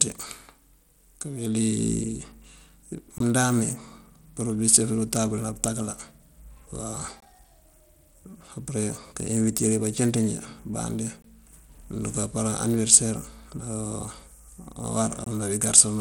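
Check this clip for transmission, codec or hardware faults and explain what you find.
Two faults are audible in this speech clip: codec damage across the whole recording and four short dropouts at regular intervals.

Throughout, the treble sounds gritty and unsteady, with grainy noise and aliasing riding on the speech and top-end detail flickering in and out. Nothing reaches above about 20.7 kHz. The likely cause is Bluetooth SBC compression at a small bit pool, consistent with roughly 96 kbps. SBC splits the signal into a few wide bands without modelling hearing, so the weaker upper bands are starved of bits while the rest are coarsely quantised. A lossy codec with a proper hearing model would leave the high end smoother and more stable.

The gaps between chunks fall at 3.18–3.20 s, 7.20–7.22 s, 11.22–11.24 s and 15.24–15.26 s. Each is a 20 ms silence, spaced about 4 s apart. Joining 4 s chunks with padding or a late start inserts these holes, but no speech is lost. 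Random packet loss would cut audio away at irregular times instead.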